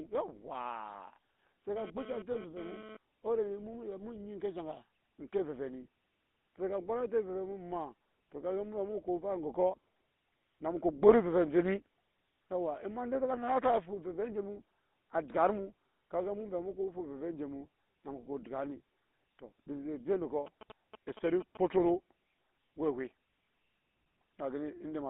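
GSM full-rate codec damage runs through the whole recording. The codec rebuilds speech from a vocal-tract model driven by a sparse, regularly spaced pulse train, so much of the fine detail of the voice never reaches the output. The result is a plainly audible buzzy, gravelly roughness, consistent with a 13 kbps full-rate stream. The band is held between about 200 Hz and 3.6 kHz, which makes the audio narrow and boxy.

GSM phone buzz runs from 1.76 s to 2.97 s. A 2G handset near the recording chain sends radio bursts about 217 times per second. The audio circuitry rectifies those pulses into a hard, raspy 217 Hz tone with a dense stack of harmonics. It sits about 14 dB below the speech and has no relation to it. The buzz comes and goes, which points to the phone moving data in spurts rather than holding a steady call.

Lost GSM frames occur from 2.32 s to 2.36 s, inside the buzz. The decoder received a corrupted frame and replaced it by reusing the parameters of the last good one. 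That short stretch becomes a brief metallic ring that holds the previous sound instead of moving on. The gap is only about 20 ms, which points to a single missing frame, so normal audio resumes before any fade to silence.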